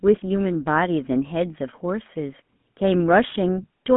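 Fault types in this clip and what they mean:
GSM full-rate codec: The whole speech clip has passed through the original GSM full-rate speech coder, which models the vocal tract and drives it with a sparse, regularly spaced pulse excitation. The coarse excitation gives the plainly audible buzzy, gravelly roughness heard here, which fits the 13 kbps rate of that coder. The sound sits in a telephone band of roughly 150 Hz to 3.5 kHz, with nothing above 3.8 kHz.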